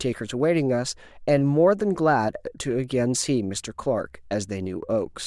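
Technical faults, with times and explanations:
0.40–4.71 s, clock slip clicks: about five faint ticks in the speech, spaced roughly a second apart at a steady rate. The cause is likely two devices running on separate, unsynchronised clocks that differ by around 40 parts per million. Each time that drift adds up to a whole sample, a single sample is dropped or repeated. That small discontinuity in the waveform is heard as a brief, regular click.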